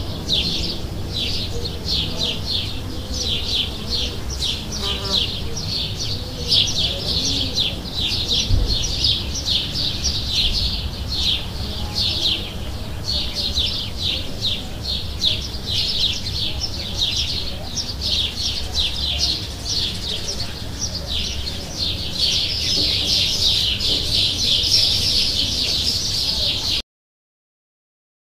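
Cut-off end at 26.81 s: the sound stops abruptly in the middle of an event, with no natural decay, and the remaining second and a half is silence. The final stretch of audio was never written or played out, so the ending is simply missing.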